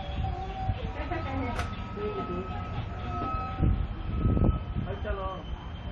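Nothing stood out on listening to this recording of sounds.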